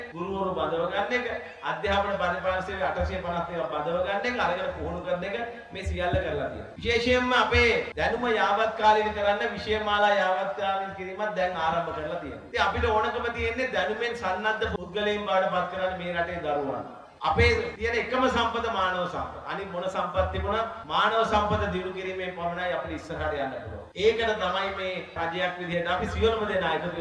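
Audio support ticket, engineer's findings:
Nothing stood out on listening, and no findings are logged against this recording.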